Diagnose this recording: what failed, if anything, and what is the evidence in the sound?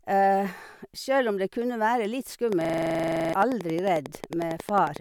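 Right after "det kunne være litt", at 2.53 s, a train of clicks starts and runs to 4.97 s. Around thirty near-identical ticks arrive at a regular 11.1 per second and peak at roughly 10 dB above the speech. They sit on top of the audio and remain audible in pauses. The stage is analogue wiring, with interference from nearby equipment as the likely source, injecting a pulse on each cycle.

From 2.65 s to 3.33 s, overlapping the clicks, there is a system hang loop. One 42.67 ms fragment repeats exactly 16 times, producing a rough buzz at 23.4 Hz instead of continuing speech, and roughly 0.7 s of audio is lost. This is a driver or buffer stage fault. The host stalled while the hardware kept replaying the same ring buffer, and the loop length fits a 2048-sample buffer.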